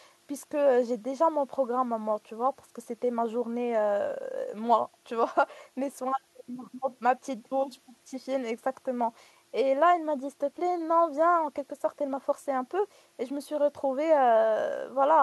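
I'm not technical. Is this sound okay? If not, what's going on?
Yes, the recording is technically sound, with no audible problems anywhere in it.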